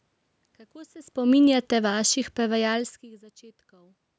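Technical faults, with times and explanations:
1.16–3.55 s, automatic gain falling: the gain control judged the input too loud or its background noise too strong and gradually lowered gain by about 5 dB, so speech and background sink together.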